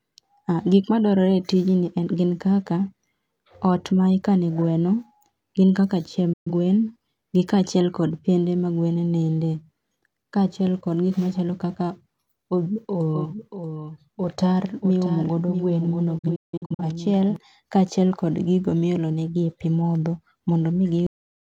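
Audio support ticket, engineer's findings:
Digital broadcast dropout: receiver muting on failed frames. Muted with an 8 ms fade at 6.33–6.52 s, just after "gin kaka", losing 128 ms (fits three frames). At 16.18–16.83 s, 341 ms lost in scattered holes, longest 171 ms (fits about eight frames).

Doubled audio track: likely a second, slower capture path mixed into the output. A full-band copy trails about 0.7 s behind at roughly 10 dB down, dry, with no room colour. It starts and stops abruptly at 13.14–17.36 s, ending just before "kaachiel kod gigo miolonegi".

Cut-off end: final buffers never written or played out. Audio stops mid-sound at 21.07 s and drops straight to digital silence with no decay.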